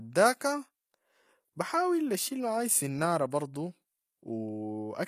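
Speech runs through the whole clip with plainly audible damage of the kind HE-AAC compression leaves, likely from encoding at a rate around 24 kbps. The upper range stays bright, yet the s sounds come out gritty and metallic, because that treble is rebuilt by copying lower bands upward rather than coded directly. Nothing remains above 14.9 kHz. An ordinary low-bitrate codec would sound dull and muffled, whereas here the highs are present but synthetic.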